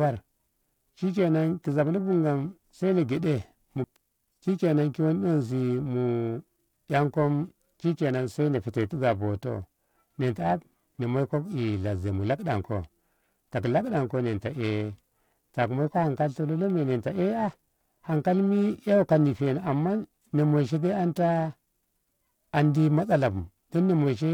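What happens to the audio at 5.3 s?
At 5.3 s the speech carries a rough, metallic edge, strongest on the brighter, higher sounds and gone in the pauses. This is periodic clock jitter running through the whole clip: interference wobbling the converter's clock at roughly 1 kHz, putting sidebands about 1 kHz either side of every component.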